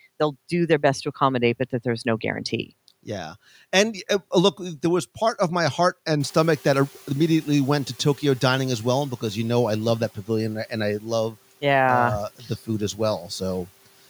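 From 6.2 to 9.06 s, just after "part of my heart", the noise suppressor is catching up: its noise estimate trails the room noise's roughly 16 dB jump, so the noise surges through before sinking about 6 dB over 2.86 s. At 12.39 to 12.5 s, just before "food as", speech is cut by the noise suppressor, which mistakes a soft stretch for noise and dips it by up to about 11 dB for roughly a tenth of a second.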